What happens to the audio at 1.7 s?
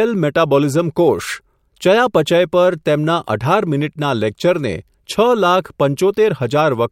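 Nothing goes wrong at 1.7 s; the speech carries straight through that moment with no dropout, click, distortion or other fault.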